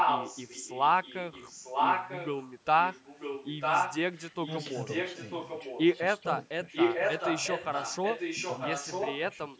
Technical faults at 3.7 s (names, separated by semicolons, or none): echo leak